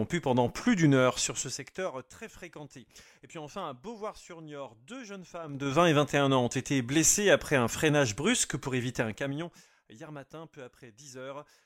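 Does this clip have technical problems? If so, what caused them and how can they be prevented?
Yes. A gain control was changed in coarse 3 dB jumps with no smoothing, causing zipper noise. Each jump clicks, so a ticking rides on the sound during roughly 20 dB moves: down from 1.20 to 2.15 s, up from 5.41 to 5.76 s, and down from 8.96 to 9.64 s. Interpolating the gain sample by sample prevents this.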